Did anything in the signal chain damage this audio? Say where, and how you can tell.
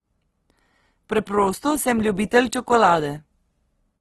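Yes. Opus compression runs through the whole speech clip: at the codec stage, nothing survives above 12 kHz and the voice sounds grainy and rough rather than swirly, as the likely music-mode encoder fills starved bands with folded or noise content. That fits a bitrate around 16 kbps.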